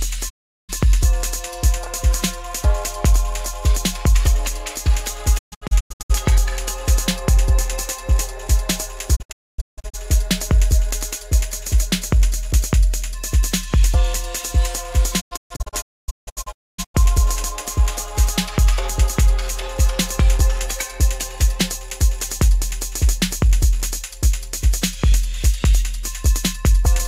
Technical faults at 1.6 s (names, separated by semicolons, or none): none